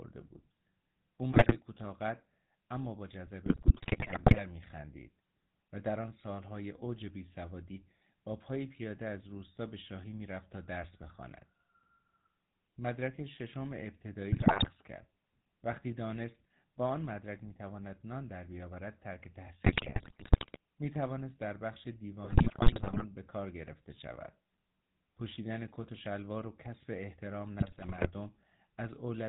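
The speech carries GSM full-rate codec coloration from start to finish. The pulse-driven vocal-tract model leaves a buzzy, gravelly texture and nothing above 4 kHz, which fits a 13 kbps full-rate stream. The damage is plainly audible throughout.

GSM bit errors break in at 1.32–1.61 s, 3.46–4.42 s, 14.32–14.68 s, 19.64–20.57 s, 22.24–23.05 s and 27.60–28.09 s. Corrupted filter, pitch and gain values bend the spectrum and spike the level frame by frame, turning the speech into squawks, pops and gargling.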